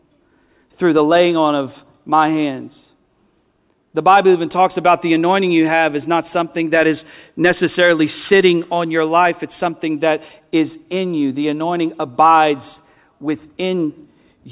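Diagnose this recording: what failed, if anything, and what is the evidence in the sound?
Nothing in this speech recording stood out as a fault on listening.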